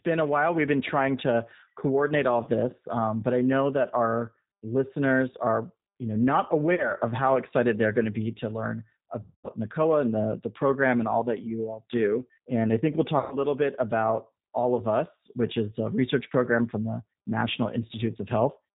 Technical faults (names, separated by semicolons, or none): G.729 codec; VoIP packet loss concealed by the speech codec